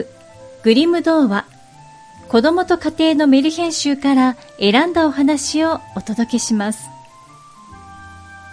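Nothing stood out as a technical problem at any point on listening.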